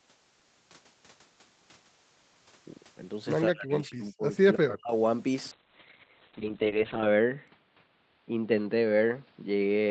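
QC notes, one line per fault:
3.48–4.93 s, speech suppressed in double talk: the speech sinks and breaks into pieces, with the deepest dips falling by roughly 40 dB and about a second of this stretch pulled down in total. It sounds as if the talker is being gated while still speaking. The likely cause is the echo canceller hearing both ends active at once. It could not tell the near talker from the loudspeaker echo, so it turned everything down together.
5.52–9.91 s, call bitrate drop: the speech turns rough and watery, and the top end goes dull as the upper band disappears. The call's bandwidth estimate fell, so the Opus encoder went from 32 kbps down to 6 kbps and held the lowest rate for 1.59 s. At that rate it codes more coarsely and narrows the audio from 8 kHz to 4 kHz, which is why the sound loses clarity and brightness.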